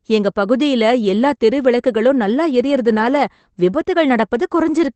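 No technical faults are audible anywhere in this recording.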